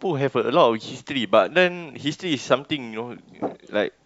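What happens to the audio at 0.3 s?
At 0.3 s the speech carries clock slip clicks, a faint regular ticking that runs from 0.2 s to 4.01 s at roughly ten per second, around forty in all. The likely cause is two devices on unsynchronised clocks drifting by a couple of hundred parts per million, so a single sample is dropped or repeated each time the gap reaches a whole sample. Unlike random crackle or dropouts, the ticks are evenly spaced and vanish in silence.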